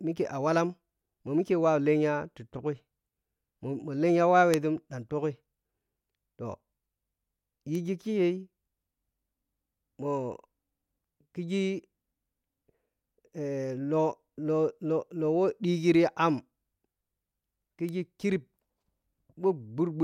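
Three bit error spikes tick through the speech at 4.54, 7.75 and 17.89 s. Flipped bits jolt the sample values briefly. The first spans three samples, about −6 dBFS; later ones reach about −18 dBFS.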